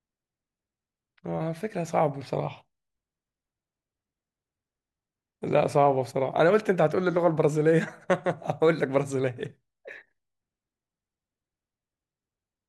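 Listening to the speech in this recording, nothing stood out as a technical fault at any point.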